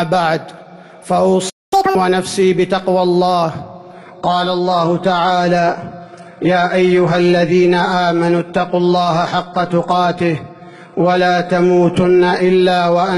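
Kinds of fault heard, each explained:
Playback stall: Sound cuts out from 1.49 to 1.73 s, likely because the player ran dry; the waveform shows a flat, silent gap of about 220 ms.
Catch-up at higher speed: From 1.73 to 1.95 s the backlog plays at double speed, pitch raised roughly ten semitones; spectrogram harmonics jump upward, waveform cycles compress.
Adaptive stream at a lower bitrate: From 3.94 s onward the treble turns thin; the spectrogram shows a hard ceiling near 11 kHz, suggesting a very low-bitrate HE-AAC stream.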